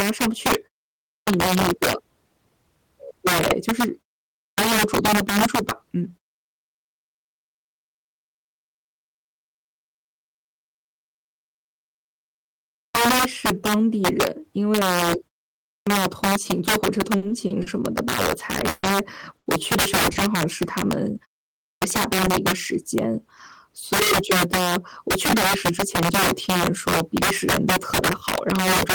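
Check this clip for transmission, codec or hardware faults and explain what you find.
Several faults are present in this speech, affecting level handling, output wake-up and packet timing.

Integer overflow runs throughout: gain pushes peaks about 14 dB past the integer limit, so a small share of samples wrap to the opposite sign, giving harsh cracks on loud syllables.

Clipped start after a pause occurs at 0.95, 4.28, 12.64, 15.58 and 21.49 s. The output device sleeps during silence and wakes late, so roughly 0.3 s of each onset is lost and speech starts abruptly.

Repeated stalls (stutter) from 17.17 to 17.81 s: late packets emptied the jitter buffer four times, with 130 ms filled in total and the longest gap 50 ms, so speech drags and stutters.

A call audio freeze from 18.69 to 18.86 s holds the sound with a fading buzz for 140 ms before it resumes where it stopped, likely from packets held up in transit.

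Short stalls from a late packet occur at 19.37 s (90 ms) and 20.12 s (30 ms): the last sound is stretched until the packet arrives, so a syllable lingers slightly.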